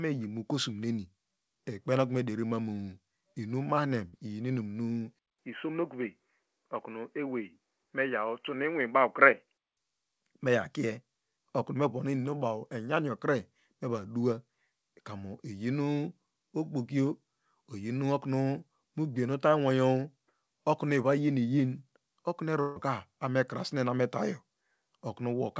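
Speech recording over a call path whose wideband sound, reaching up to about 8 kHz, fits the G.722 codec. At 4.08 to 4.16 s the sound briefly smears into a held, fading sound before jumping ahead: a burst of packet loss, where about 47 ms was filled by extending the last sound and roughly 40 ms went missing. From 5.19 to 9.77 s the audio turns dull and boxy, with nothing above about 3.1 kHz, a 200 ms silence at the switch and a faint new noise floor at an unchanged level, most likely an input switched to a poorer device. At 22.61 to 22.79 s the sound stretches into a decaying buzz or hiss for about 152 ms with no silence, then resumes with about 160 ms gone, likely the mark of a long network dropout.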